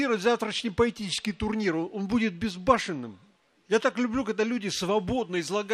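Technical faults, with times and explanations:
0.98–1.52 s, drift correction step: the sound slows by 5.86% and drops 105 cents, about a semitone, then snaps back to normal rate. The cause is likely a clock-matching resampler changing its playback rate in one jump to rebalance its buffer, so speed and pitch move together.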